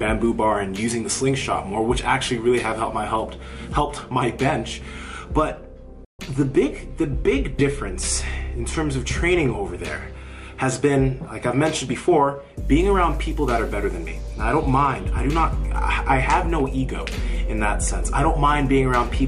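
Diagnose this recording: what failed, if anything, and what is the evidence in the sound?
Playback stall, playback stage. The sound cuts out at 6.05 s and resumes at 6.19 s, after about 141 ms of silence. The player likely ran short of data.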